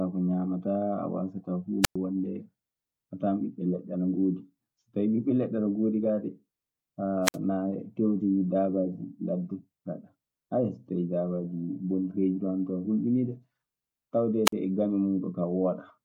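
Wireless microphone squelch dropouts cut the speech at 1.82–1.96 s after "a waasataa" (about 106 ms muted), 7.23–7.37 s (57 ms), and 14.45–14.53 s before "e gaño" (46 ms). The fading radio signal brings a brief rise of hiss before the receiver mutes, which distinguishes it from a clean digital gap.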